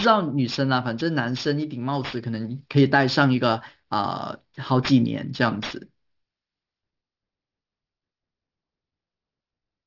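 From start to finish the speech carries aliasing. The rate was lowered, pointing to a drop to 12 kHz, without filtering first. Energy above 6 kHz folds back down as false tones, roughly 15 dB under the speech. Sibilants sound gritty and metallic.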